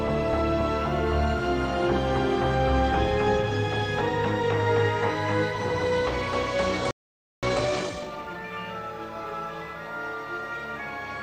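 At 6.91 s the sound cuts off mid-flow and stays silent for about 0.52 s, until 7.43 s. This is a playback stall. The player likely ran short of data or was blocked, so nothing reached the output until it recovered.

From 7.43 s to 8.45 s comes a time-compressed catch-up. The player trims its backlog by removing short slices and cross-fading the joins. The audio runs at 1.5 times normal speed. Pitch stays unchanged.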